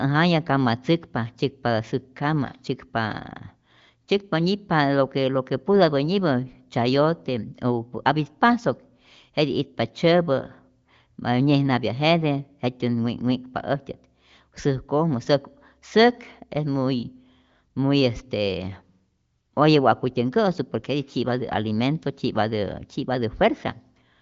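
Nothing is technically wrong with this speech clip, which comes through the AMR wideband (HD Voice) codec with its audio band ending near 7.5 kHz.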